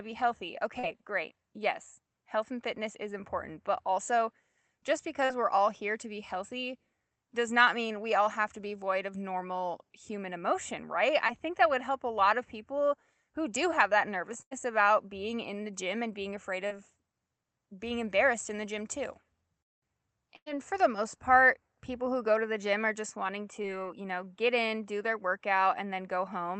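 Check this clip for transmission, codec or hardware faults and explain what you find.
The clip has transmission faults: seven packet-loss events of two kinds.

Short concealed packet loss occurs at 0.79, 5.25 (between "important but also just" and "we're all here to"), 11.27, 16.67 and 23.62 s (between "gym are just wanting" and "you know get in"). About 20 to 40 ms of audio arrived too late, so the decoder extended the preceding sound and blended back, leaving a brief smear or wobble.

A burst of packet loss occurs at 14.42 and 20.36 s, the second just before "for the most part". About 100 ms went missing in each. The receiver stretched the last sound into a held, fading buzz or hiss, then the speech resumes with that stretch skipped.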